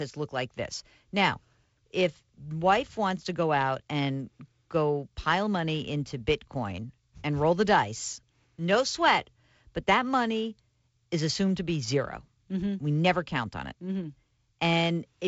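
Nothing stood out on listening to this speech, which comes through G.722 wideband telephone coding with its usual band limit of about 7.7 kHz.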